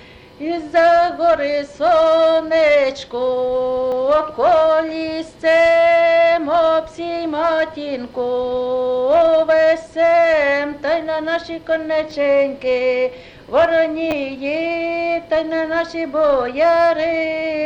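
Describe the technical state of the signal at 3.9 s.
A brief click or buzzy tick at 3.92 s, rather than an audible stutter, as a tiny slice of sound plays twice in a row with a hard seam at the join. This is a repeated buffer. New audio did not reach the output in time, so the device played its last block once more. The doubled segment is very short, which fits a 10 ms buffer, and no audio appears to have been dropped.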